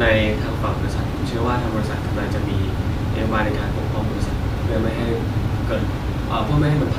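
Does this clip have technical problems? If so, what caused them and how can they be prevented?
No, nothing in this speech recording stood out as a technical problem on listening, so there is nothing to trace back or prevent.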